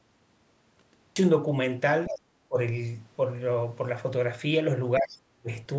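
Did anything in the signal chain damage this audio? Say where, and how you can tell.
Yes. First, a cut-off start: digital silence runs from 0 to 1.16 s, then the speech jumps in mid-sound at 1.16 s with no attack or fade. That's the recording or stream starting late, at the capture or storage end.

Second, around 2.07 to 2.19 s there's a short scrap of the other side's voice leaking through, roughly 10 dB under the talker. That's call processing. The likely cause is the far end playing from the loudspeaker and the echo canceller not fully cancelling it from the mic.

Third, speech suppressed in double talk, again in call processing. The talker dips by roughly 10 dB at 2.09 to 2.18 s, roughly 20 dB at 2.48 to 2.57 s, and drops out almost completely, around 40 dB, from 4.99 to 5.49 s. The echo canceller likely couldn't separate the talker from the echo and ducked both.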